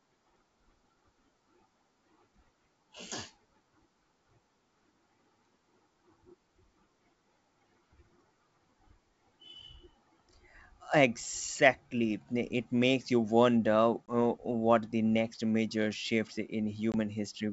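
At 14.07 s and again at 16.92 s, right after "the next major shift", there's packet loss on an ADPCM call. A hard 20 ms hole, about one packet, leaves the decoder's predictor and step size out of sync, so the speech comes back slightly distorted before settling.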